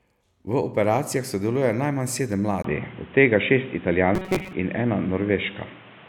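Input switched to a poorer device at 2.62 s, right after "operacijah sodeluje najmanj sedem": a brief 20 ms gap, then speech turns dull, with a new noise floor and a level shift, likely a microphone change. Robotic sound from repeated short buffers, 4.15 to 4.53 s: a rigid metallic buzz at 188 Hz as most audio is skipped, likely from a roughly 5.3 ms buffer being repeated.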